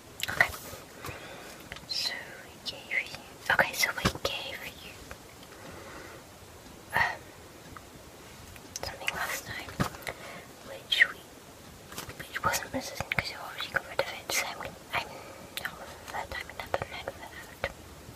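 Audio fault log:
No technical fault can be heard anywhere in the signal.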